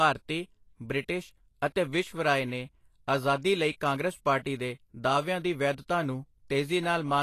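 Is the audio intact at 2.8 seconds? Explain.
No. At 2.8 seconds the speech carries Vorbis compression, present throughout. Likely a low-bitrate encode (fits about 36 kbps) coarsely quantising treble residue into grainy hiss, with nothing above 14.2 kHz.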